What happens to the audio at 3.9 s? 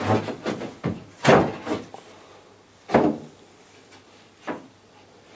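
Nothing goes wrong at 3.9 s: the audio carries on intact there, with only the ordinary call microphone processing shaping it.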